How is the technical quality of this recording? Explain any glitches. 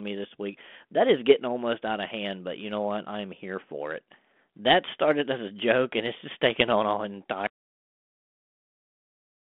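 The recording has one clear glitch, an audio dropout to a faint residue near the end. The speech comes over a narrowband telephone channel consistent with 32 kbit/s G.726 ADPCM, limited to roughly 200 Hz to 3.5 kHz.

The audio dropout to a faint residue begins at 7.47 s, right after "just taken on an", and lasts to the end of the clip. The speech cuts off abruptly, with no fade or natural pause, leaving only a low mains hum about 55 dB below the speech level. The likely cause is a break in the wanted signal while the path downstream stayed live, so the open input passes hum instead.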